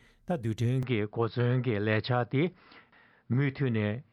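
At 0.83 s the sound abruptly narrows and stays that way to the end: everything above about 5.3 kHz disappears, leaving a duller, boxy tone, with a faint new background noise underneath. There is no gap at the transition and the level stays roughly the same. The likely cause is the input switched to a poorer device partway through recording, a second microphone or headset path with a narrower passband and its own noise floor.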